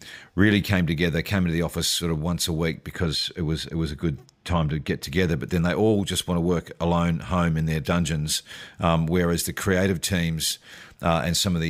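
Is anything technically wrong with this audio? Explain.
Yes. De-emphasis applied wrongly, from 2.92 to 5.03 s: a treble cut meant to undo a pre-emphasis boost lands on speech that never had one, so highs slope smoothly away, about 11 dB down at 10 kHz relative to 1 kHz, leaving it dull and muffled.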